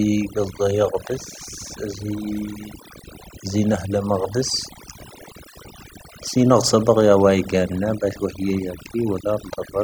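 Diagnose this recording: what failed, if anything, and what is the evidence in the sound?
The failure is overdone noise removal, and it runs the whole length of the speech clip, so it sits in the call-processing stage. Listen to the gaps between phrases: the background drops and breaks up into twinkling, warbling specks where stray bands poke through. The suppressor was set too aggressively for a noisy input, zeroing bands near its noise estimate and taking the quieter voice components with them.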